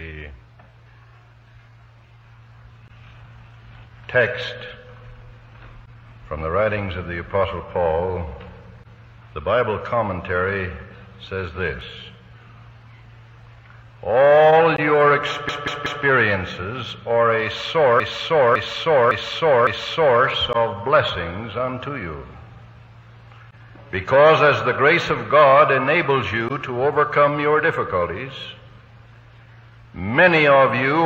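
At 15.49 s the audio stutters with repeated frames: a block of about 186 ms plays three extra times, to 16.05 s, adding 557 ms. From 18.00 to 20.23 s a longer block of about 557 ms repeats four extra times, adding 2.23 s. Compressed frames were sent or written more than once. Unlike an echo or a dropout, each repeat is an identical copy of the same block, nothing is lost, and the clip simply runs longer.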